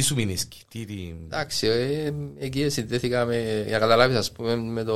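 Nothing in this speech recording stood out as a technical problem on listening.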